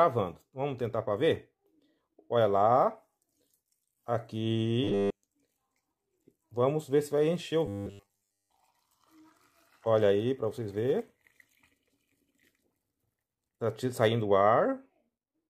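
Robotic sound from repeated short buffers appears from 4.84 to 5.23 s and again from 7.66 to 8.50 s. Most of the audio in each span is a fragment replayed over and over, likely from buffers of about 10 ms, which imposes a rigid metallic buzz at 100 Hz.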